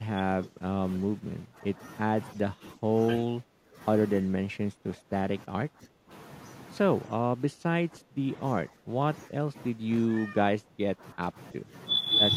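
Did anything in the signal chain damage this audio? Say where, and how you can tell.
Yes, in call processing. The speech drops by about 15 dB at 0.0–1.79, 2.34–2.9, 3.21–3.78, 4.22–6.1, 7.08–8.34 and 8.69–11.71 s. The likely cause is speech suppressed in double talk. The echo canceller mistook overlapping talk for echo and turned it down.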